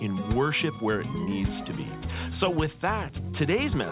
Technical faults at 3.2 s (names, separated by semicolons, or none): none